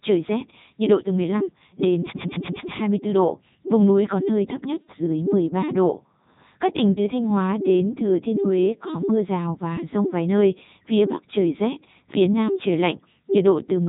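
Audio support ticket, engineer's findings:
Codec 2 vocoder artefacts on the speech throughout. Robotic, buzzy voicing, consistent with Codec 2 and fitting its 3.2 kbit/s mode. The decoder rebuilds the voice from sine-wave harmonics driven by pitch, voicing and envelope, so the original waveform is lost. On the spectrogram, clean comb-like harmonics with no energy above 3.8 kHz. On the waveform, over-regular periodic cycles. Damage heavy.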